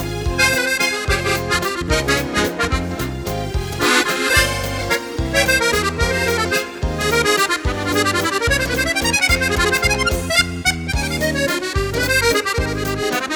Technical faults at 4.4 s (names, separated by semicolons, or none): none